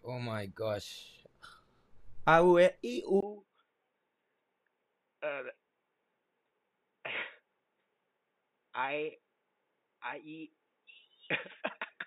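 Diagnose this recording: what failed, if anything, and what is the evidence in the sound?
The input was likely switched to a poorer device at the driver level. At 3.2 s a 20 ms gap opens, then the speech turns boxy, with nothing above 3.8 kHz, drops roughly 10 dB in level and carries a faint new noise floor to the end.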